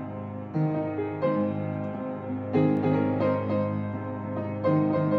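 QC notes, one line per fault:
2.77 s to end: doubled audio track, a dry copy about 5 dB down trailing roughly 300 ms behind and cutting in abruptly; likely a second, slower capture path.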